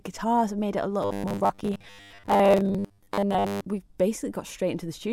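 Speech, and from 1.03 to 3.67 s the voice collapses into a rigid, metallic buzz pitched at 100 Hz that only loosely tracks the words: robotic sound from repeated short buffers. It is likely caused by late-arriving audio, with the software looping about 10 ms blocks over most of that stretch while skipping the real signal.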